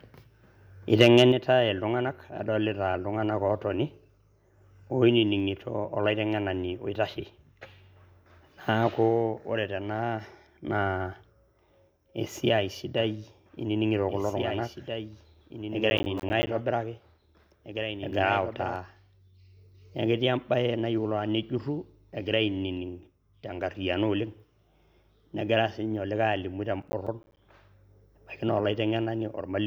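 Microphone overload at 1.0 to 1.22 s flattens the loudest speech peaks, pushed about 4 dB past the converter's limit, likely from excessive input gain, adding harsh crackle. A microphone volume stepped down at 1.3 s drops voice and background together by about 6 dB, likely as the software cuts input level right after that distorted peak. A doubled audio track from 12.98 to 18.76 s adds a dry full-band copy of the speech, about 10 dB quieter and roughly 2 s behind, that starts and stops abruptly, likely a second capture path running alongside. Processor overload crackle at 15.9 to 16.47 s and 26.82 to 27.37 s comes from a run of missed deadlines, each leaving a hard-edged silent gap. Short gaps of roughly 10 ms, around fifteen of them per burst, fit a 10 ms buffer, and together they sound like gritty tearing.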